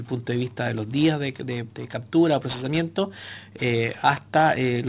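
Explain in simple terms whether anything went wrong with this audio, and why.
The high, hissy parts of the sound come out gritty and metallic, with odd tones that don't belong, from start to finish. This is aliasing: the audio was squeezed to a lower sample rate, which points to about 8 kHz, without first removing everything above 4 kHz, so those frequencies folded back as false pitches.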